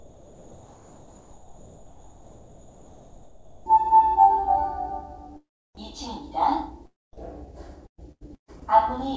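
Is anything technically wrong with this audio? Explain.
Yes, there are three faults.

From 0.0 to 3.66 s, the background sounds like comfort noise in place of the real background. It is a steady, featureless hiss, about 4 dB quieter than the true ambience. The likely cause is the sender pausing transmission and the receiver synthesising roughly matched noise until sound resumes.

From 3.70 to 4.01 s, there is a jitter buffer speed-up. The receiver had built up too much delay and trimmed short slices of waveform to catch up, removing about a twentieth of a second in total. The sound runs at 114% speed with its pitch unchanged, so it feels briefly rushed.

From 7.86 to 8.50 s, there is repeated packet loss with a robotic sound. Four gaps follow one another closely, the longest 133 ms. Each gap is patched by stretching the preceding sound, and about half the stretch is concealed this way. 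The result is choppy, with pieces missing. Throughout, nothing is heard above 8 kHz, consistent with the call codec's band limit.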